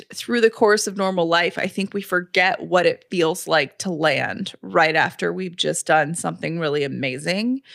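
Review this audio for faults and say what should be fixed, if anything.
No faults can be heard in this speech recording. Nothing needs fixing.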